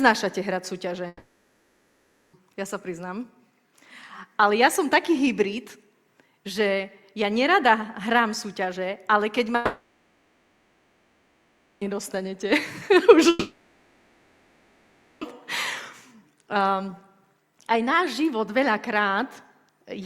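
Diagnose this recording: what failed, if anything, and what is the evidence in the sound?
The network stage failed, most likely through a long network dropout at 1.07–2.35 s, 9.55–11.83 s and 13.29–15.23 s. The receiver filled each gap of about 1.3, 2.3 and 1.9 s with a fading buzz or hiss. The sound then resumes with that stretch missing, the first after a brief silence.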